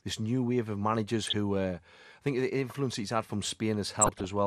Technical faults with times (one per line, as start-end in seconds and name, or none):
0.00-4.46 MP2 compression
1.21-1.33 DAB burbling
4.01-4.25 DAB burbling